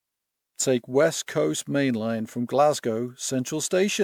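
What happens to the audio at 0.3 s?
At 0.3 s the speech is carrying generation loss that runs through the whole clip. It was likely decoded and re-encoded with MP3 about seven times, at quality consistent with 128 kbit/s. Each pass requantised the signal on a shifted frame grid, so noise and spectral gaps piled up. The speech sounds swirly, smeared and hollow, worse than one encode at that rate would, and consonant attacks are blurred.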